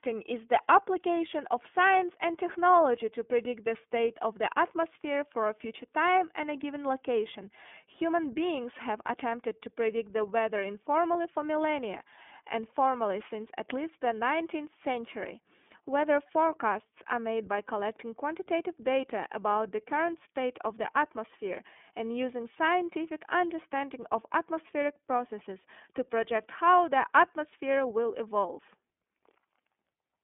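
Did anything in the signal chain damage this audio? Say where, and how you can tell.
Yes. The damage sits at the codec stage: the speech was carried through the iLBC codec for the whole clip. Nothing above 3.7 kHz survives and the band runs from about 200 Hz to 3.5 kHz. Coding each frame independently leaves plainly audible roughness and a synthetic edge, which fits its 30 ms, 13.33 kbps mode.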